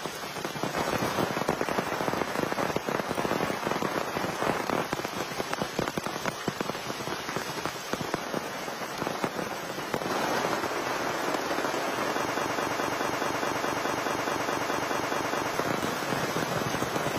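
A broken-record loop runs from 12.33 s to 15.54 s: a single fragment about 0.21 s long repeats exactly, back to back, 15 times, giving a rigid, stuttering rhythm of roughly five repeats per second. The likely cause is a player, encoder or stream that stalled and kept resending the last fragment it held. Whatever audio belonged to those three-odd seconds is gone, replaced entirely by the repeating piece.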